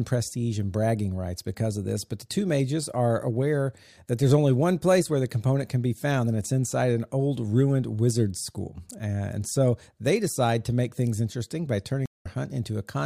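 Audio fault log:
12.06–12.26 s: stream reconnect. The speech drops to silence for 163 ms, then resumes somewhat later, skipping roughly 150 ms, as a fresh decoder starts mid-stream with a brief fade-in. On a spectrogram: a blank vertical gap, then content resuming out of step.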